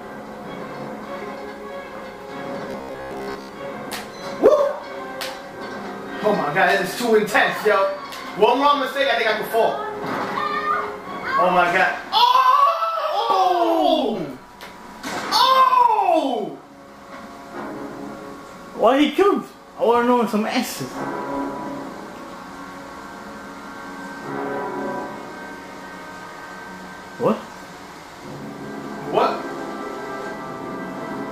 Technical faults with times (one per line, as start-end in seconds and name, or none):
2.71-3.52 robotic sound from repeated short buffers